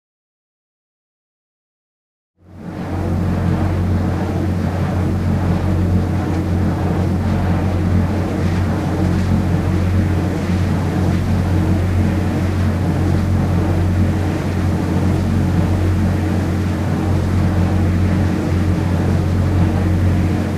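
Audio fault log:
No audible faults found.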